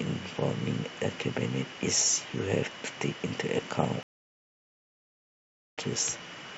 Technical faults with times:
4.03-5.78 stream reconnect

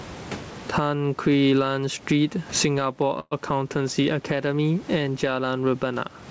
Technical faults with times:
0.00-6.31 gain pumping
3.20-3.33 call audio freeze

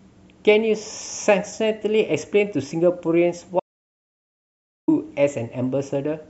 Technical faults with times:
3.60-4.88 audio dropout to silence

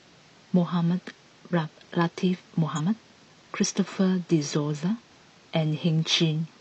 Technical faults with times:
2.74-2.81 damaged data in a compressed stream

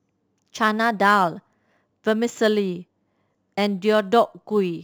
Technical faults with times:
0.00-4.84 crude rate conversion

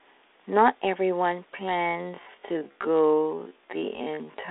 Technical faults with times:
1.51-4.51 time-stretched section

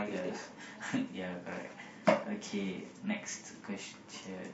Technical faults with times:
0.59 compressed frames skipped

